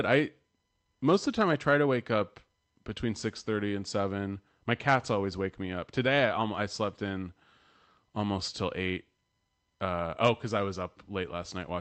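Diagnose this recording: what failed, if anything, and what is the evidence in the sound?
Nothing failed in this recording: the speech comes through the Opus call path as that path normally sounds, and nothing in the sound points to a fault.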